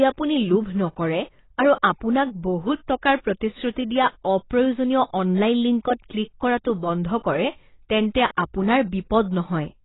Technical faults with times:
0.00-9.84 AAC compression
8.37 pre-echo

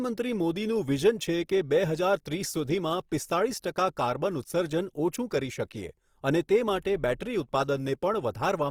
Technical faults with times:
0.00-8.70 Opus compression

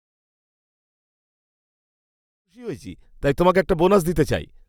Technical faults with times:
none

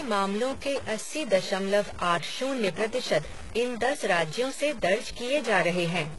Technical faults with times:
0.00-6.18 stuck bit
0.00-6.18 HE-AAC compression

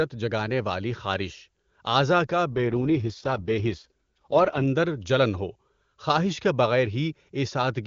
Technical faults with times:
2.50-4.66 AMR rate drop

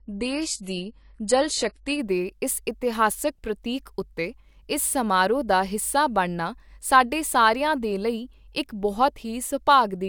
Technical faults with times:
0.00-2.00 adaptive stream starting at a low bitrate

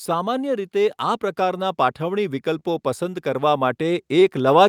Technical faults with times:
0.05-4.68 automatic gain rising
4.20-4.24 short stall from a late packet

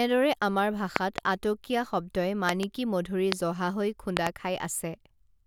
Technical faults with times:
0.96-1.20 loud pop
2.49-2.65 loud pop
3.32-3.34 loud pop
4.17-4.29 loud pop

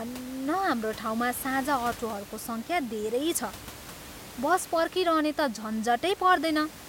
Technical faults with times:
none

